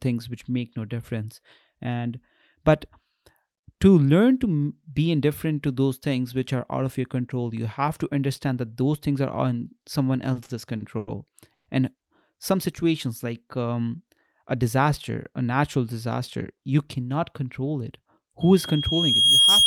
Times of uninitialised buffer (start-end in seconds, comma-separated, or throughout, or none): none